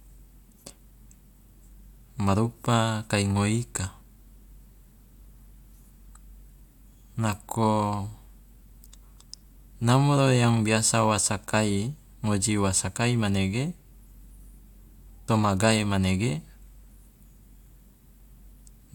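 At 15.27 s the speech jumps abruptly forward, with a brief blip marking the join. Where the sound should carry on smoothly, it cuts off and resumes at a later point. This is likely a stream segment skipped: one chunk of the segmented stream failed to arrive, and the player moved straight on to the next, so a stretch of the programme never played and the two surrounding pieces were butted together.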